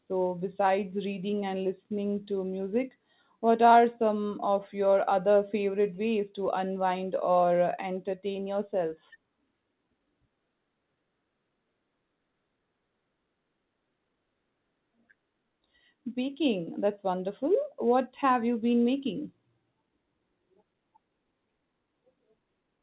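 Speech carried over a WebRTC call path, with nothing above 4 kHz as fits a G.711 mu-law codec, and nothing in it is technically wrong.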